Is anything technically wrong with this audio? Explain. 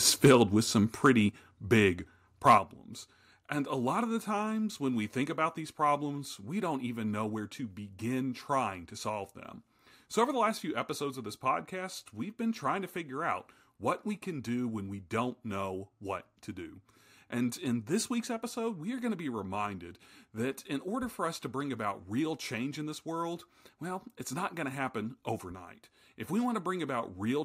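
Yes, the clip has two related problems. The first is microphone overload from 0.24 to 0.36 s, 1.05 to 1.09 s and 2.47 to 2.55 s, with peaks about 6, 2 and 4 dB over the converter's limit. The speech is likely driving the converter past its limit. The crests are cut flat, giving a harsh crackle. On the waveform these look like squared-off tops, and the spectrogram shows broadband smearing.

The second is the microphone volume being stepped down at 0.28, 1.29, 2.58 and 10.5 s, by about 3, 5, 6 and 2 dB. This is likely the call software's gain control reacting to the clipping. Voice and background drop together in a single step, which shows as a sudden shrink in the waveform envelope and a dimmer spectrogram from that point on.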